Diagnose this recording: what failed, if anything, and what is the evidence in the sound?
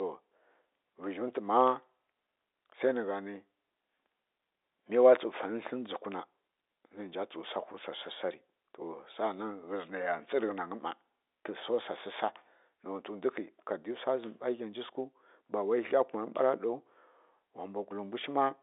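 Nothing failed: the speech carries the expected signature of G.711 telephone coding, a 300 Hz to 3.7 kHz line band with nothing above 3.8 kHz, and no stage in the chain shows a defect.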